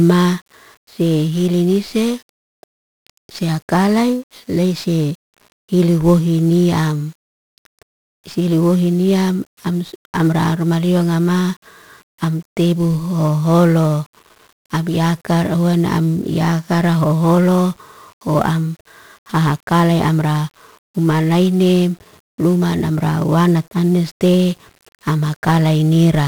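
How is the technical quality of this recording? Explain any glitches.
The technical quality is poor: heavy codec damage runs through the whole speech recording. It comes from 1-bit DFPWM compression, present from start to finish. Each sample is reduced to a single up-or-down decision that nudges an adaptive level toward the signal. That makes strong broadband quantisation noise, so the speech sounds fuzzy and crackly, with its treble buried in hiss, consistent with a rate around 48 kbps. Unlike ordinary low-bitrate lossy coding, there's no swirly or watery quality. The damage is a constant granular noise bed tied to the signal.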